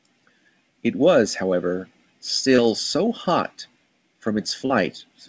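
Brief smears at 2.56–2.60 s and 4.66–4.72 s are short concealed packet loss: about 20 ms and then 40 ms of audio arrived too late and were synthesised by continuing the preceding sound.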